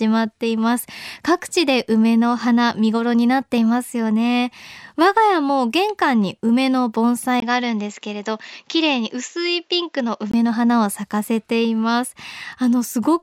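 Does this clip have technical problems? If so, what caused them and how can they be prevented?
Yes. Input switched to a poorer device, likely, from 7.40 to 10.34 s: after a 20 ms gap, speech loses everything above 7.6 kHz, drops about 5 dB and picks up faint new background noise. Fix the recording input in the system settings so it cannot change devices mid-session.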